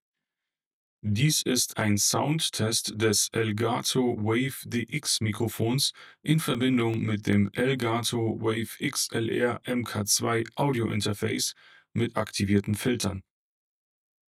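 Channel delay (comb filtering) runs through the whole clip: one channel lags the other by around 20 ms, and summing them to mono cancels shared content at evenly spaced frequencies from around 30 Hz upward, leaving the sound rough or slightly doubled.

CD scratch ticks appear from 6.35 to 7.33 s and again from 12.86 to 13.85 s, six ticks in each burst at roughly six per second. Once per disc revolution, the damage exceeds what error correction can rebuild, so the player patches or mutes a few milliseconds of samples. Each patch is heard as a brief click or micro-dropout.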